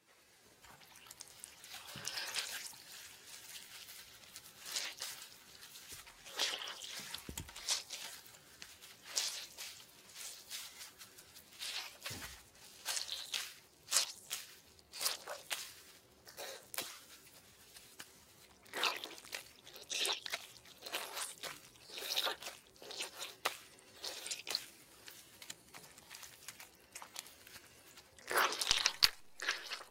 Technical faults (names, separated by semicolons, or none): none